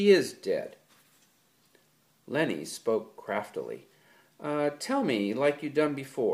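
At 2.72 s a lost LE Audio frame briefly turns tones into a noisy smear, as the decoder refills the gap (which fits one 7.5 ms frame) with the previous spectrum under scrambled signs. On a spectrogram this is a thin vertical smudge where harmonic lines blur.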